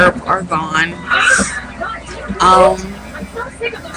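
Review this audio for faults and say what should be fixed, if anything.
Computer activity noise enters at 2.48 s and runs to the end: a buzzy chirp pulsing around 500 Hz, roughly 30 dB below the signal. Processor or graphics load is shifting the shared ground, so unlike steady mains hum, it tracks the machine's activity rather than the audio. Use an external USB interface or a ground-loop isolator to prevent it.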